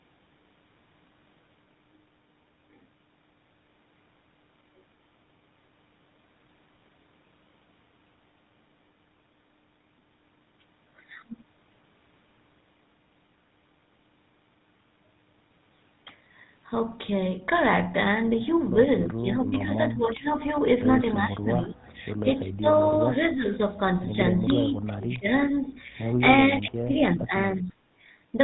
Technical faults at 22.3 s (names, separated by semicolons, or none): GSM full-rate codec; speech suppressed in double talk